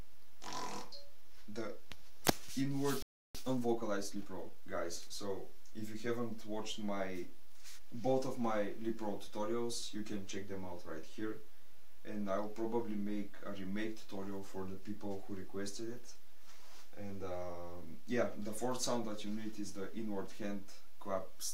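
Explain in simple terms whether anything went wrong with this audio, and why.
At 3.02 s the sound cuts out for about a third of a second, until 3.35 s. This playback stall likely happened because the player briefly ran out of data. From 3.35 to 4.63 s the audio runs hurried, about 1.25 times normal speed, at its usual pitch. That is time-compressed catch-up: the player trims small pieces to make up for the delay.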